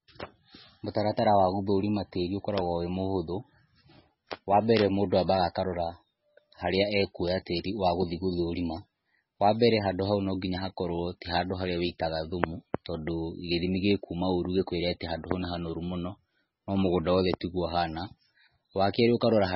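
From start to finish the speech is dull and watery, with nothing at all above 5.6 kHz and swirly, metallic chirps on s sounds. That's likely heavy MP3 compression, which fits a starved bitrate around 16 kbps, forcing the encoder to chop the treble and flicker weak frequency lines.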